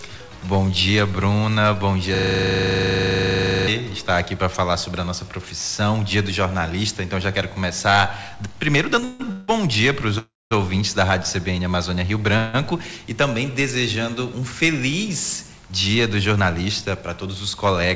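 From 2.15 to 3.68 s, a system hang loop repeats one 40 ms stretch of audio 38 times while the driver stalls, producing a steady 25 Hz buzz. At 9.00 s, a short stall from a late packet leaves the jitter buffer empty, so the receiver holds the sound for 25 ms and a brief buzzy smear results. Call audio freezes follow at 9.04 to 9.22, 9.32 to 9.50, 10.18 to 10.53 and 12.37 to 12.56 s. Each hangs the last sound as a fading buzz or hiss, and the third decays into about 210 ms of silence, likely from delayed packets draining the jitter buffer. From 16.29 to 17.90 s, a jitter buffer speed-up removes roughly 150 ms in small pitch-period cuts, running about 8% fast at unchanged pitch and sounding hurried.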